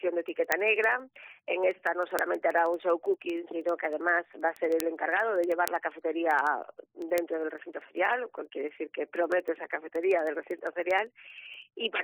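From 0.13 s to 12.0 s, sharp ticks repeat at a steady rate, roughly every 0.07 s. These are word clock ticks: the receiving device runs on its own clock, not locked to the sender's and roughly 300 ppm off, so each time the clocks slip, one sample is dropped or repeated.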